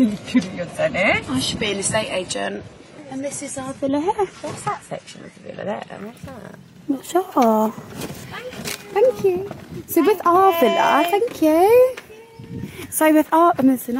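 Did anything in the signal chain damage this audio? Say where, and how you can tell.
Yes. An adaptive stream started at a low bitrate: until 6.0 s nothing sounds above 11.5 kHz, which fits a 32 kbit/s AAC rendition, then quality steps up seamlessly.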